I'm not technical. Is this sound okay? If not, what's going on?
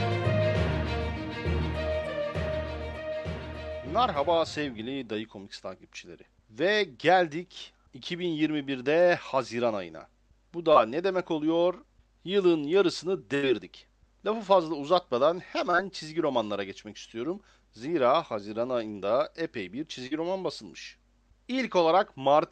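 No, there are small dropouts. Short concealed packet loss at 6.25, 10.73, 15.71 and 20.07 s: bits of sound arrived late, so the call briefly stretched the previous sound to cover each hole, causing tiny smears. At 13.35 s there's a burst of packet loss, a gap of about 80 ms that gets covered with a held, fading sound before the audio jumps ahead.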